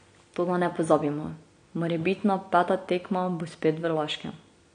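From start to finish the speech carries AAC compression artefacts, plainly audible throughout. Nothing remains above 9.8 kHz, so the top of the spectrum is cut off and the speech sounds dull, with smeared detail and a warbling, fizzy edge on sibilants and held sounds. This is likely low-bitrate AAC-LC, where the encoder quantises each frame's frequency lines coarsely and lowers its bandwidth to save bits. The damage fits a bitrate around 32 kbps.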